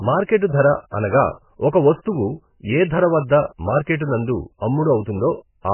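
Throughout the recording the speech has most likely been through MP3 compression at a very low bitrate, around 10 kbps, leaving the encoder far too few bits. It cuts the treble at 3 kHz, so nothing sounds above that point and the speech is dull and muffled. Heavy damage shows as weak frequency lines dropping in and out between frames, which makes the sound watery and swirling, with s sounds blurred and attacks smeared.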